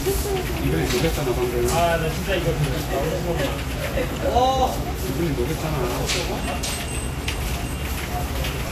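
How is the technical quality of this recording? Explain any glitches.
Technical quality is limited by lossy coding damage that runs through the whole clip.

Vorbis compression, throughout: the likely cause is low-bitrate Vorbis encoding, consistent with roughly 36 kbps. Nothing remains above 14.2 kHz, and the remaining treble is quantised so coarsely that its detail turns into hiss, leaving a grainy top end with roughened tones and softened attacks.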